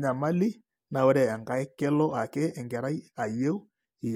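Speech recording with no technical faults heard anywhere in the clip.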